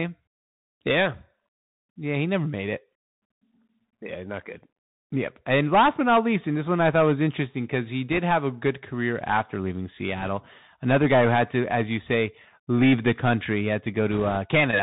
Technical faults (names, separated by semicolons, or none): Bluetooth CVSD headset codec; bit errors on a Bluetooth voice link